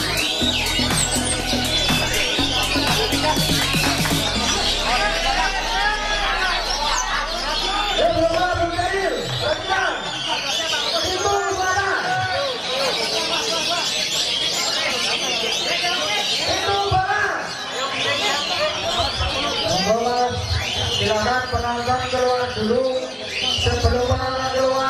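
From start to finish the sound is dull and carries a gurgling, granular grit, which points most likely to MP2 compression at a low bitrate, consistent with roughly 80 kbps. The encoder's 32 equal sub-bands are short of bits, so upper bands switch on and off and the remaining ones are coarsely quantised. Unlike a simple low-pass filter, the top end flickers rather than stopping cleanly.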